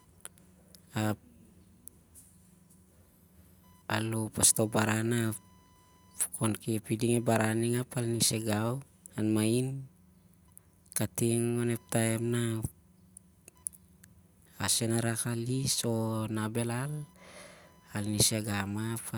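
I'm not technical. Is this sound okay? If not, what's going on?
No. Throughout the speech there is a faint, thin buzz, like a high whine or chirp, sitting well below the voice. It pulses around a thousand times a second and rises and falls with what the computer is doing, not with the talking. This is computer activity noise: as the processor, graphics card or mouse work harder or less hard, they disturb the electrical ground shared with the audio circuit, and that disturbance leaks into the recording.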